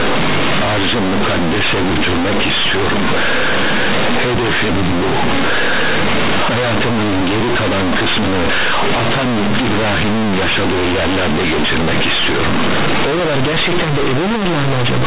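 From start to finish, this speech is companded audio read as linear: mu-law telephone bytes are played back as plain 8-bit samples without expansion, so every sign change flings the output across roughly half its range. Quiet passages come out as loud as peaks, giving harsh, buzzy distortion and heavy noise in pauses. The waveform looks like a dense, uniformly loud block, and the spectrogram shows broadband smear filling the band below 4 kHz, the upper limit of the G.711 channel.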